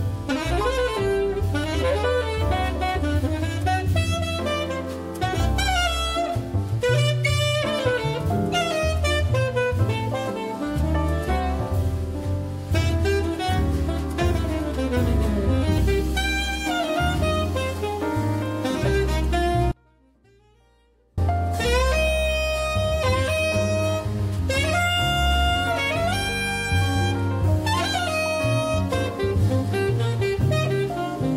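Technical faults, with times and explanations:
19.72–21.18 s, audio dropout to a faint residue: the sound cuts out abruptly for about 1.46 s, then returns just as suddenly. The gap is not silent. A faint sound remains, roughly 35 dB below the signal's normal level. The break is too sharp to be a pause or a fade. The likely cause is the wanted signal being lost for a moment while the path after the break stayed live, letting only a faint sound through.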